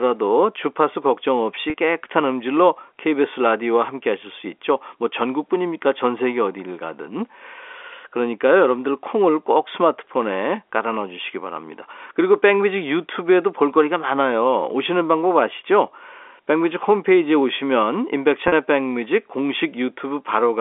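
Speech in the narrow 300 Hz to 3.5 kHz telephone band of G.711 coding, with packet loss with pitch repetition at 1.70 s and 18.48 s. Each 40 ms gap is filled by repeating the last pitch period, heard as a brief held, buzzy sound, consistent with two lost 20 ms packets.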